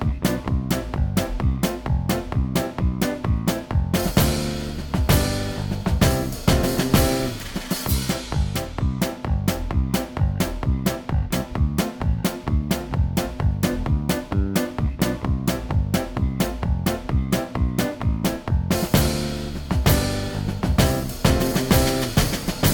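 No technical faults can be heard anywhere in the clip.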